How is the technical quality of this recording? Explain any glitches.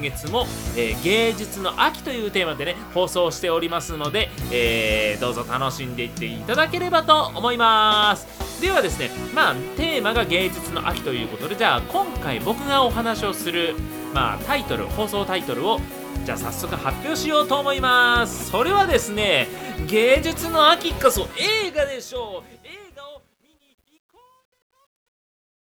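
The recording has one glitch, in the closing fade-out, which begins around 21 s.

Truncation distortion on a fade runs from 21.14 s to 25.67 s. The fade stage keeps too few bits, consistent with about 11-bit resolution, and adds no dither, so the falling waveform collapses into coarse steps. From 22.53 s onward the tail turns gritty.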